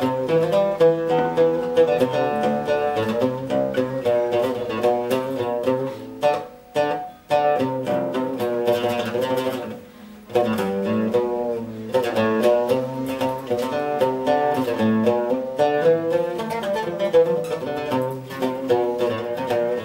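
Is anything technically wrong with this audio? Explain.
No, nothing technically wrong can be heard anywhere in this audio.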